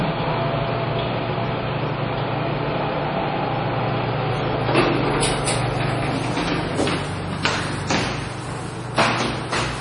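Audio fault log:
Throughout, MP3 compression: the audio sounds watery and swirly, with nothing above 10.5 kHz. This is likely a heavily squeezed MP3, at a bitrate around 32 kbps, where the encoder cuts the treble and drops weak frequency detail frame by frame.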